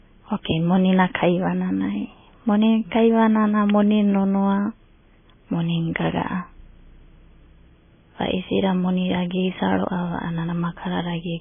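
MP3 compression is heavy throughout the speech clip, giving a watery, swirling sound with nothing above 3.5 kHz. The likely cause is a very low bitrate, around 16 kbps. Short of bits, the encoder drops weak frequency lines that flicker between frames and cuts the treble.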